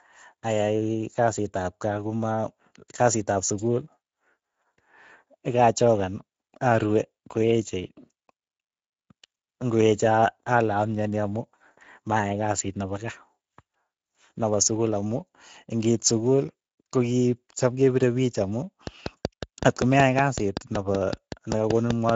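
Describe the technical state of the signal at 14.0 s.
At 14.0 s the speech carries Speex codec damage, present across the whole clip rather than at this moment alone. The CELP coder has too few bits for its excitation signal, which fits a bitrate near 17 kbps, so the speech sounds plainly noisy and hoarse.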